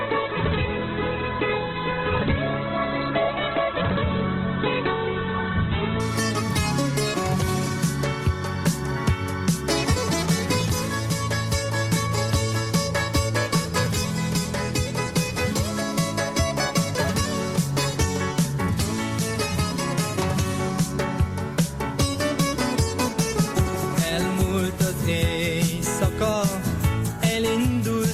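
From 0 to 6.0 s the adaptive stream is starting at a low bitrate: the audio is dull and smeared, nothing above about 4.1 kHz, consistent with a very low Opus rate. At 6.0 s it jumps to higher quality with no gap, fitting around 64 kbit/s. The spectrogram shows a flat ceiling that suddenly lifts.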